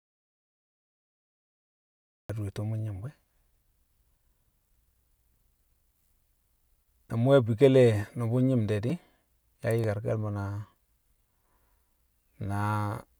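The speech opens in complete silence, with no room tone, until 2.3 s. This audio dropout to silence likely comes from a lost input while recording continued. A block of digital silence then gives sharp ticks at 8.90 s (about 2.9 ms, fitting a 128-sample block) and 9.84 s (under 1 ms), where samples were zeroed.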